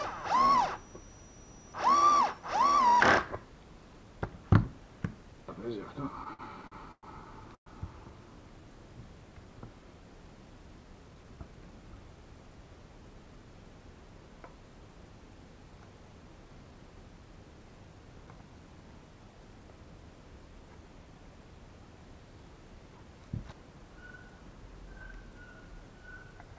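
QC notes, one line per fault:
6.24 to 7.05 s, repeated stalls (stutter): the sound keeps catching and hanging for a moment, five times in under a second, with the longest hang about 112 ms. Packets were arriving late or slower than playback, so the jitter buffer kept running dry and the receiver stretched the last bit of sound each time. Nothing is lost (around 227 ms was filled in, over a quarter of that stretch), but it drags and stutters.
7.55 to 7.68 s, call audio freeze: a short hold of about 115 ms, where the last sound is carried on briefly and then drops to silence for roughly 90 ms before the audio picks up right where it left off. The likely cause is packets getting held up in transit until the buffer emptied. Once they turned up, playback carried on, so a gap was inserted and the delay grew by about 115 ms.
10.77 to 11.53 s, jitter buffer speed-up: this stretch runs quick, about 111% speed, with the pitch unchanged, so it sounds a bit hurried. 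The buffer was holding more audio than it wanted, probably after that earlier backlog arrived in one go. To catch up, the receiver trimmed many tiny pitch-period-sized slices in quick succession, about a tenth of a second in total. The band-limited call sound, with nothing above 8 kHz, fits a G.722 path.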